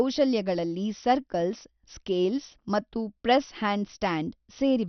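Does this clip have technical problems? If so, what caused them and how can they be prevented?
Yes. MP2 compression, throughout: the speech is dull, with nothing above 6.1 kHz and a gurgling grain. This is likely from starved upper sub-bands, which fits a bitrate around 48 kbps. Encoding at a higher bitrate or with a more efficient codec prevents this.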